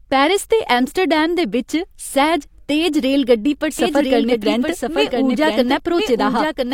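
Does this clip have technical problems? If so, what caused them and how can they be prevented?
Yes: a doubled audio track starts abruptly at 3.79 s and runs to the end, with a second copy of the speech about a second behind and about 5 dB quieter. It is likely caused by a second, slower capture path feeding the same signal into the mix. To prevent it, route each source through only one path and mute duplicate inputs or monitoring returns before recording.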